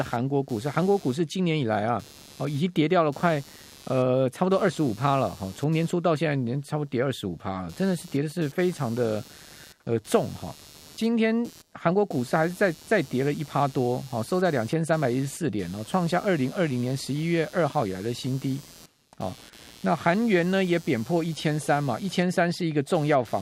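Computer activity noise runs under the speech throughout: a buzzing pulse near 150 Hz, roughly 25 dB down, from computer load changes shifting the shared audio ground.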